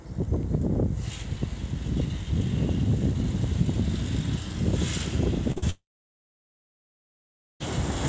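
At 5.52 s and again at 5.58 s, short concealed packet loss sets in: two back-to-back stretches of about 40 ms each failed to reach the decoder in time, so the receiver invented the missing sound by extending what it had just played and then blended back into the real signal. Through this G.722 call path, which already leaves nothing above 8 kHz, the result is a brief smeared wobble running from 5.52 to 5.64 s.

From 5.70 to 7.62 s there is a long network dropout, likely the cause of this 1.9 s gap in which no audio arrived at all. The decoder first continued the last sound as a fading buzz or hiss for roughly a tenth of a second, then gave up, leaving about 1.78 s of silence. Sound resumes at 7.62 s, with everything from that missing stretch gone rather than delayed.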